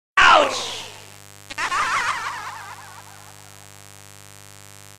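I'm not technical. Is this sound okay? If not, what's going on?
No. From 0.39 s to the end there's a mains buzz, a raspy electrical buzz from 50 Hz power wiring. It sounds gritty rather than like a smooth, low hum.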